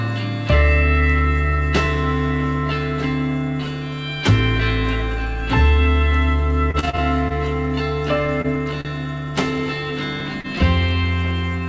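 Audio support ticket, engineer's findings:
Repeated packet loss (robotic sound), 6.71 to 7.33 s: choppy stretch with pieces missing. Six separate gaps, longest 33 ms, about 90 ms of audio lost and 146 ms synthesised by the receiver's concealment, roughly 23% of the span. Network loss recurring faster than concealment can recover.

Short concealed packet loss, 8.41 to 8.55 s and 10.41 to 10.47 s: brief smear or wobble. About 30 ms missing at each, filled by extending the previous sound before crossfading back. First event slightly lengthens the passage by a few ms.

Short stall from a late packet, 8.81 to 8.88 s: sound held too long, slight buzz. Jitter buffer ran dry; receiver stretched 42 ms until the packet arrived. No content lost, but playout delay rose by 42 ms.

Bandwidth stops at 8 kHz throughout, which fits the G.722 call codec on this path.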